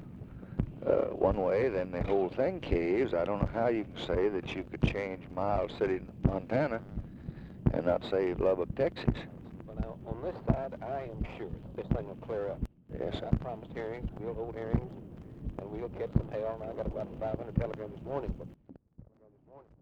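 From 7.29 to 9.06 s the audio carries sample clock jitter: a fine hiss and roughness around 50 dB below the signal that swells on loud, bright passages and disappears in quiet gaps. Steady background noise wouldn't do that. Timing errors of about 0.7 microseconds produce it. A sudden gain jump drops the level by about 17 dB from 12.66 to 12.89 s, then by about 19 dB from 18.54 s to the end. Each change is instantaneous rather than a fade, and the background noise steps down with the sound, likely because a digital gain change was applied without a ramp.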